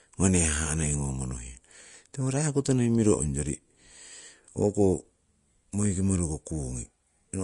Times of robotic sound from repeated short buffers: none

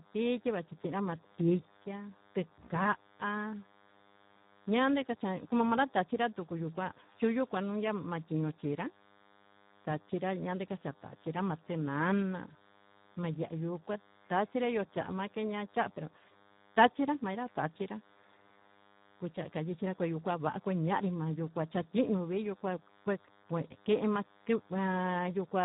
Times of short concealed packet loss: none

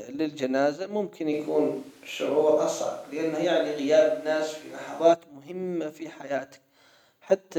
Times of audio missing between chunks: none

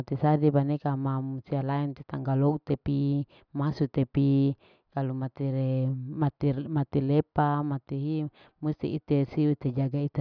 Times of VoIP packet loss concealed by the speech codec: none

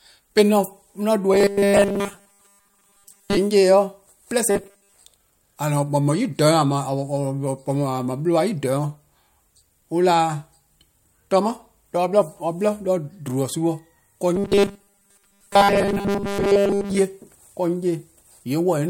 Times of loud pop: none

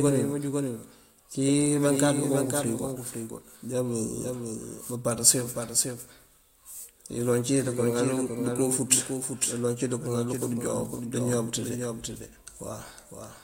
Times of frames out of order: none

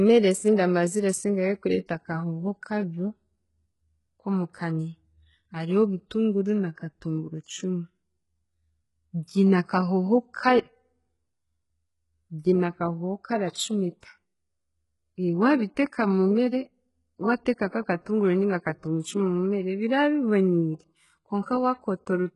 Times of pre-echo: 13.50-13.56, 21.42-21.46

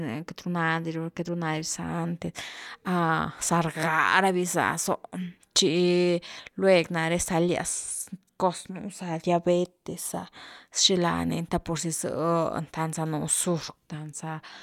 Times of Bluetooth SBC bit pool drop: none

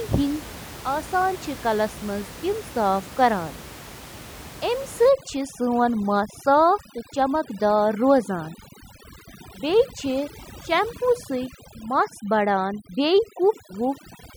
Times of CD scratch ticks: none

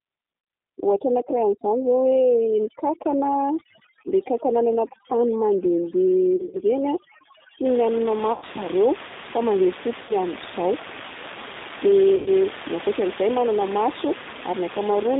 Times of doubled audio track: none

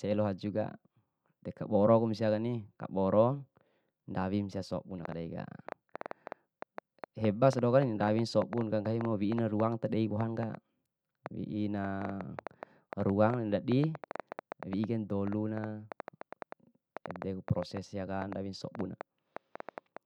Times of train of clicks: 5.05-19.98

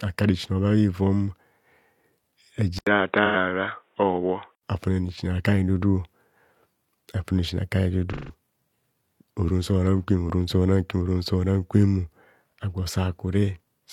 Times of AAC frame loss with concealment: 3.25-3.36, 8.12-8.33

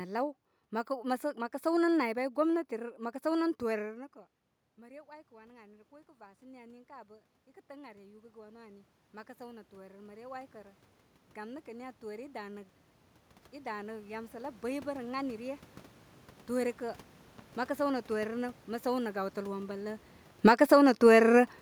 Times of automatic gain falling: 20.30-20.74

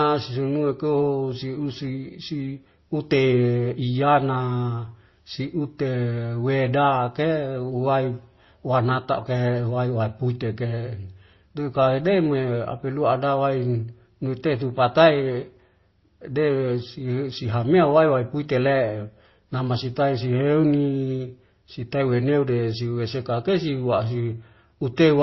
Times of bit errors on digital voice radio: none

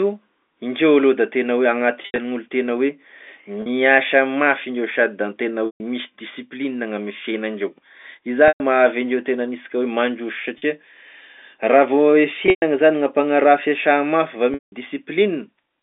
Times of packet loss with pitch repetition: 2.02-2.18, 3.62-3.66, 5.66-5.80, 8.48-8.60, 10.58-10.62, 12.46-12.62, 14.54-14.72

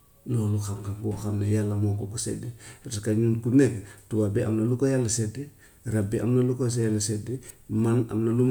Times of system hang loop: none

